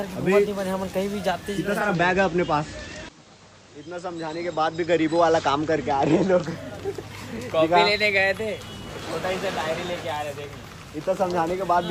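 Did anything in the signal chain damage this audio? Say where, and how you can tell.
Yes, at the radio receiver: digital radio blending to analogue FM from 1.57 s to 6.81 s, with 0.45-second cross-fades. On a spectrogram a faint hiss floor, roughly 35 dB down, appears, while the waveform level holds steady.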